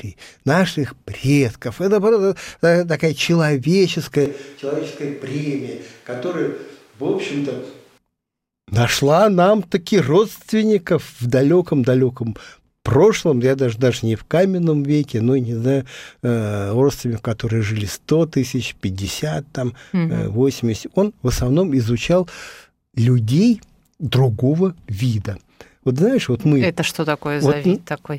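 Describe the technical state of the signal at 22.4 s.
At 22.4 s the speech signal is intact, with no dropout, distortion, glitch or other technical fault audible at that moment.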